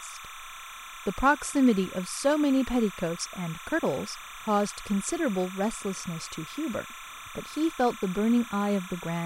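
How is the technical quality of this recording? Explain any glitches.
The speech is marred by one fault that runs the whole way through.

Timecode bleed, throughout: linear timecode at 29.97 frames per second is leaking in from a neighbouring track or cable. Its square wave flips between tones near 1 and 2 kHz, roughly 15 dB below the speech, producing a constant chirping warble behind the speech.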